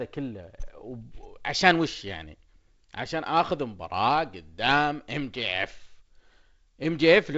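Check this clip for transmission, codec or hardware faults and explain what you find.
No transmission, codec or hardware faults.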